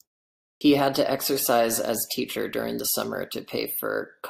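At 0.57 s, after a 0.57 s pause, a clipped start after a pause swallows about 40 ms as the output wakes; the waveform jumps abruptly from flat silence.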